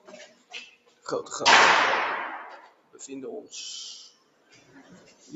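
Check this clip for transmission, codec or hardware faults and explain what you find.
A speech-tuned noise suppressor is running on this material, and it is pulling parts of the sound down. The call path's 8 kHz bandwidth and the microphone high-pass are normal.

Noise suppressor applied to music or sounds runs through the whole clip. The suppressor estimates a noise floor and attenuates anything steady enough to resemble it, so sustained tones, ambience and reverberant tails are treated as noise while transients pass. Gain therefore moves with the signal's character rather than its level, with swings of around 20 dB. The result is audible pumping and thinning as held portions sink between attacks.

Sound cut by the noise suppressor occurs at 0.27 to 0.52 s, 0.70 to 1.06 s, 2.61 to 2.99 s and 4.10 to 5.31 s. In each span the suppressor classified the sound as noise and applied extra attenuation, reaching about 13 dB at its deepest. 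The last span is the longest, roughly a second. Steady or decaying material in these windows drops away or has its tail truncated, while sharper onsets survive.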